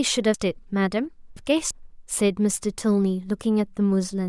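A speech clip with chunks out of order: a block of about 341 ms that belonged at 0.34 s arrived three chunks late and plays at 1.37 s instead. Nothing is missing, but the sequence from 0.34 to 1.71 s sounds jumbled, with hard joins at 0.34, 1.37 and 1.71 s.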